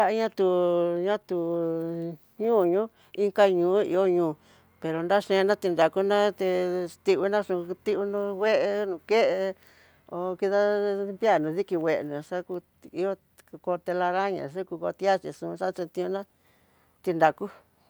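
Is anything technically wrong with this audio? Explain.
No, nothing in this speech recording points to a technical fault.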